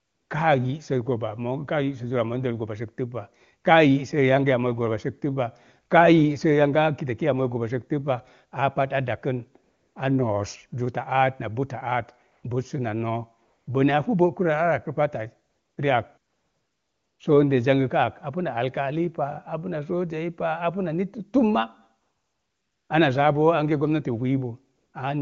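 The phone's voice activity detection judged the talker silent and stopped sending speech frames, so the receiver filled each gap with AMR comfort noise built from a coarse level-and-spectrum description. This happens at 0.00–0.29, 9.63–9.95, 12.31–12.43, 13.45–13.67, 15.49–15.77, 16.17–17.19, 22.01–22.89 and 24.75–24.93 s. In each gap the real background gives way to a smooth, steady hiss that switches in and out against the clear wideband speech.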